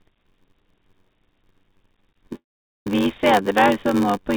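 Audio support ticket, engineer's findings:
Block size mismatch (padded), whole clip. Steady buzz at 93.8 Hz, the block rate, with audio running slow at 0.861x but near normal pitch. Writer stage fills short blocks; reader pulls full ones and zero-pads the remainder, which fits a 512-sample read. Unlike resampling or clock drift, pitch holds while tempo drops, and the buzz rate stays fixed.

Call audio freeze, 2.35 to 2.87 s. Last sound carried on and faded, then about 390 ms of silence, before the audio resumes exactly where it stopped. About 442 ms inserted and nothing lost, so delay grows by that amount. Likely jitter buffer underrun from held-up packets. Unlike packet-loss concealment or a dropout, no audio is skipped. G.711 mu-law band limit at 4 kHz is audible throughout.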